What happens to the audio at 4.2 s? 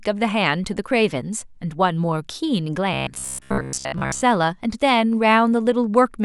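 Robotic sound from repeated short buffers runs from 2.94 s to 4.22 s: new audio likely arrived too seldom, so roughly 15 ms chunks loop, replacing most of the speech with a rigid metallic buzz near 66.7 Hz.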